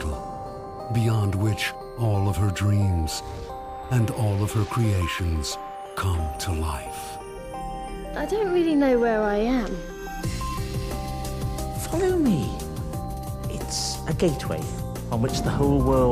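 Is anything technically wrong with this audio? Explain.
No, nothing technically wrong can be heard in this audio. There are no faults to report.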